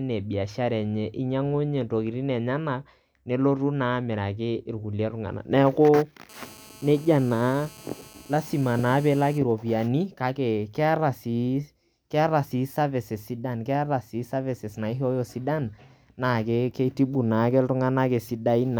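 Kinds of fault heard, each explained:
GSM phone buzz: A 2G mobile handset close to the recording chain was sending its radio bursts during a call, and the audio circuitry demodulated those pulses into sound. The result is a hard, raspy buzz repeating at about 217 Hz, rich in harmonics. It has nothing to do with the speech underneath. It runs steadily from 6.29 s to 9.38 s, sitting about 24 dB below the speech level, then stops.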